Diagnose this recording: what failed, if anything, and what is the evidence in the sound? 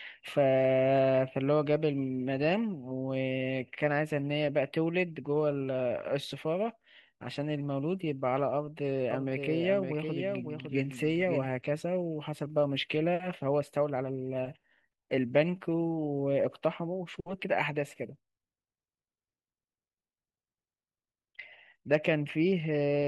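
From 9.11 s to 11.47 s the speech carries a doubled audio track. A full-band copy trails by about half a second, about 5 dB quieter. It is dry and starts and stops abruptly. The likely cause is a second, slower capture path at the driver stage.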